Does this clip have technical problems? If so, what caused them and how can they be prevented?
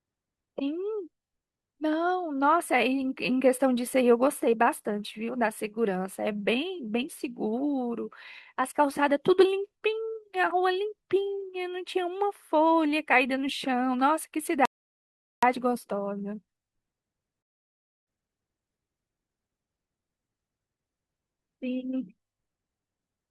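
Yes: two rebuffering stalls cut the speech to silence at 14.65 s (0.77 s) and 17.43 s (0.65 s), then resume exactly where it stopped. A larger playback buffer would prevent them.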